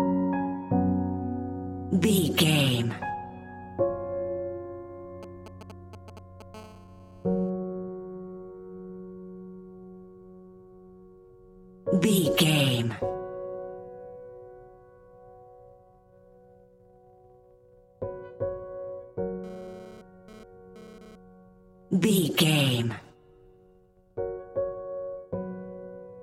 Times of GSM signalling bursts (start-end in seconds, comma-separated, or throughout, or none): 5.23-6.42